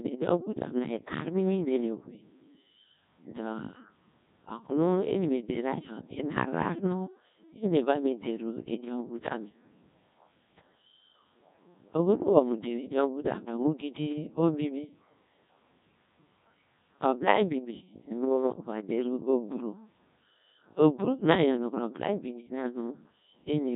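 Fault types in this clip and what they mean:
Codec 2 vocoder: The whole clip sounds robotic and buzzy, because the decoder rebuilds the speech from sine waves using only pitch, voicing, energy and a spectral envelope. The heavy damage fits roughly 1.6 kbit/s, and nothing comes through above 3.8 kHz.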